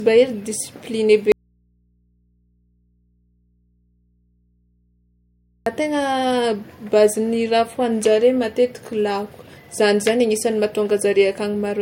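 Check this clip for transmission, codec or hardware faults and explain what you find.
Two faults stand out in the speech.

From 1.32 to 5.66 s, an audio dropout to a faint residue: the speech cuts abruptly to mains hum about 45 dB down for 4.34 s, likely an input losing its signal while the path stayed live.

Throughout, there is nothing above 16.6 kHz. This is likely low-bitrate audio saved at a high bitrate, fitting an MP3 near 60 kbit/s re-encoded at 192 kbit/s.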